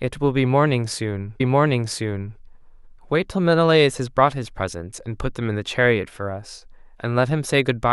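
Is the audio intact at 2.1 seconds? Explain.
No. At 2.1 seconds the clip is inside a stream segment repeated fault spanning 1.40 to 2.39 s: the player queued the same segment twice, so about one second of speech plays again, with a small blip at the jump back.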